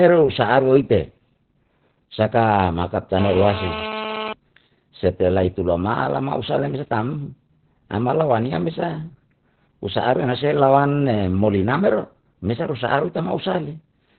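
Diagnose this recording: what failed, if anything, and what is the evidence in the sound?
The failure is at the codec stage, and it lasts the whole clip. This is Opus voice compression, running in its SILK speech mode. Nothing is present above about 4.3 kHz, so the speech is squeezed into narrowband and sounds muffled. The voice also sounds hoarse and slightly robotic, because the excitation is coded coarsely. That heavy damage points to a very low bitrate, around 8 kbps.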